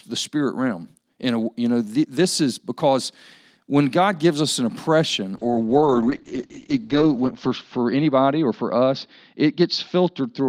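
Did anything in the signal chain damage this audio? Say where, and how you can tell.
Yes. A call bitrate drop begins at 5.37 s and lasts to the end of the clip at 10.49 s. This is a codec-stage fault driven by the network. The speech turns coarse and watery, and its top end collapses from about 20 kHz to 8 kHz, which fits the encoder being pushed from around 32 kbps down to roughly 8 kbps. The roughest stretch holds for about 1.7 s, when the encoder had too few bits to code the speech finely.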